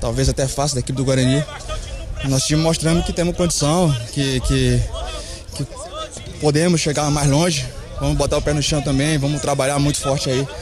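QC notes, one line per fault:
Nothing to flag here; I didn't hear anything that needs a line in these notes.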